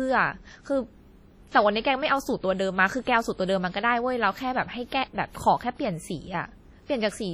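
Across the whole speech clip, the sound rings and smears, with a washy hiss that swells and fades with the signal. Quiet detail drops out. This heavy damage is likely WMA compression, and fits a low bitrate near 32 kbps.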